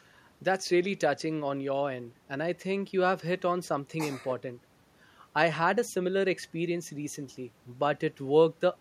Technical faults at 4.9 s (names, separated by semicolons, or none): none